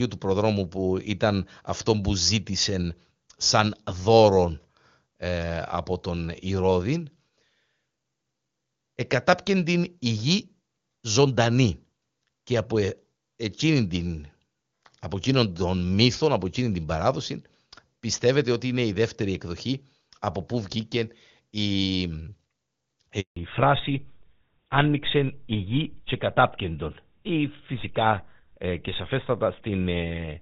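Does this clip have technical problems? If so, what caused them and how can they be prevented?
Yes. A handover gap cuts the speech from 23.20 to 23.36 s: for 160 ms no frames arrive while the call moves between networks, so the sound drops quickly to silence. Unlike packet loss concealment, nothing is smoothed over or repeated. Keeping the phone on one network during the call, or using a network that supports seamless handover, prevents it.

A fallback to narrowband follows immediately, from 23.36 s to the end. Everything above 4 kHz disappears, and the sound turns duller and rougher, which fits a switch from HD Voice to an older narrowband codec such as GSM full rate. Before the switch, the wideband codec sounds clean, at a quality consistent with its highest rate. Because the change is a lasting step at a handover, it is not gradual bitrate adaptation within the same codec. Staying within HD Voice or VoLTE coverage, and choosing networks that carry wideband codecs end to end, prevents it.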